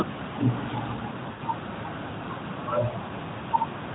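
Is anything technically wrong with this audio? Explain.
Yes, there are lost AMR speech frames at 1.32 to 1.42 s and 3.38 to 3.44 s. The decoder stretches the last good frame with fading gain, so the speech smears briefly and dips. The first gap, about 80 ms, fits four dropped 20 ms frames. The AMR narrowband coding does only light damage and passes nothing above 4 kHz.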